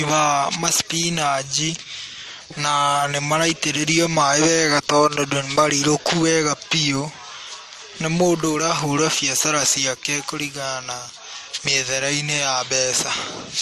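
Throughout, the speech is dull above 13.9 kHz, with different codec artefacts stacked together. This is likely transcoding between lossy codecs, fitting MP3, HE-AAC, then MP3.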